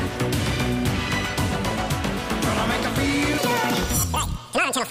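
From 3.38 s to 4.90 s, a section at the wrong speed plays at 1.97 times normal, likely from a clock mismatch during playback or editing. The sound turns hurried and rises roughly ten semitones. Unlike a plain pitch shift, timing and pitch change together.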